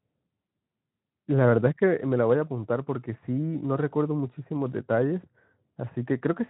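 No faults to report on this speech recording; the Speex coding, at a rate that sounds like roughly 15 kbps, leaves only a light codec character on the sound.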